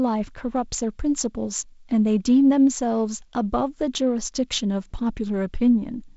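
No technical faults can be heard in this speech clip, which carries the mark of G.722 wideband telephone coding, with content stopping near 7.7 kHz and the light hiss and slightly grainy lower band pointing to the codec's reduced 48 kbit/s mode.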